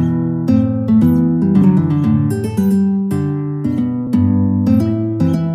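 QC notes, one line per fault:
4.07 s, audio missing between chunks: about 50 ms skip, joined with no silent gap unlike a dropout, likely lost at a 2.5 s chunk boundary.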